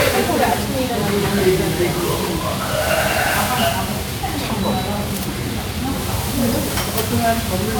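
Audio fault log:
throughout, generation loss: The audio has likely been decoded and re-encoded with MP3 about seven times, each pass quantising again on a shifted frame grid so the errors pile up rather than cancel. The result sounds swirly and hollow, with smeared, watery high end and blurred attacks, more degraded than a single pass would leave it. This fits a repeated MP3 chain at around 128 kbit/s.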